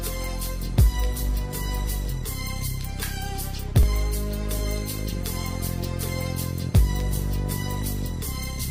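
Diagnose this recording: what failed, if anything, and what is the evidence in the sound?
Overlap between stream segments at 1.87 s, 3.83 to 3.85 s, 5.84 to 5.87 s and 7.82 s, heard as short clicks or skips about every 2 seconds. At the playback or streaming stage, overlapping segment timestamps made the player discard 8 to 28 ms of audio, so the waveform jumps at each boundary.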